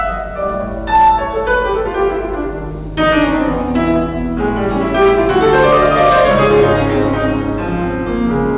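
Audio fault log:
No faults turn up here; the sound just carries the narrow, phone-like character of a G.711 mu-law call path at 64 kbps, with nothing above 4 kHz.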